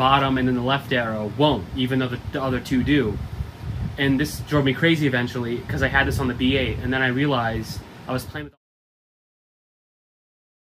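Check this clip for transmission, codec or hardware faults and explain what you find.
No faults found.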